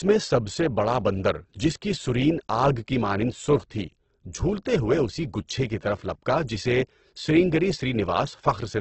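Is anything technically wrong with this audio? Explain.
Yes. Throughout the speech, the audio sounds heavily grainy and rough, and nothing remains above 8.1 kHz. The likely cause is Opus compression. Short of bits, its CELT mode fills bands with noise or folded copies of lower bands. This damage fits roughly 12 kbps.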